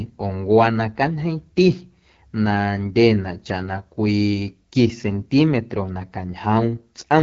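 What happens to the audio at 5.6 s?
The speech at 5.6 s carries AMR wideband (HD Voice) codec damage, as it does throughout the clip. The harsh, raspy texture points to one of AMR-WB's lowest rates, around 8.85 kbit/s, where the model-driven coding roughens the voice. A spectrogram shows an empty band above 7.5 kHz and a diffuse, noise-like top band where fine harmonic detail is missing.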